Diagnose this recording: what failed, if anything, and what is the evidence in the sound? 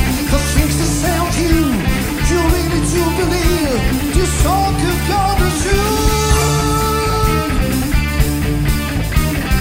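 Low bit depth with dither, from sample-format conversion: from 5.92 s to the end, dithered 8-bit rounding leaves a steady, undistorted hiss roughly 30 dB down.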